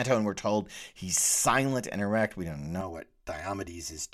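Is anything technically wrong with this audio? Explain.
Yes. From 2.81 s to the end at 4.13 s there is channel delay (comb filtering). One channel lags by roughly 3 ms, and the mono sum cancels shared content at evenly spaced notches starting near 150 Hz. The speech sounds hollow and phasey. Unlike a flanger, these notches stay fixed rather than sweeping.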